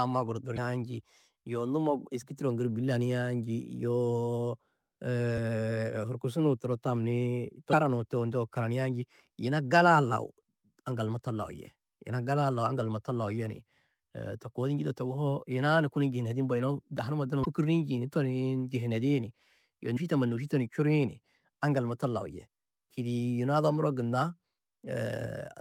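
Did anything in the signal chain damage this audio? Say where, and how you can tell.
Yes. The damage sits at the codec or storage stage: damaged data in a compressed stream. Five short bursts interrupt the speech, at 0.54 to 0.58 s, 5.34 to 5.38 s, 7.69 to 7.73 s (just before "turo ndeu"), 17.41 to 17.46 s and 19.93 to 19.97 s. Each lasts about 40 ms and sounds like a chirp or blip. Corrupted bytes made the decoder misread those frames. It lost sync and searched for the next valid header.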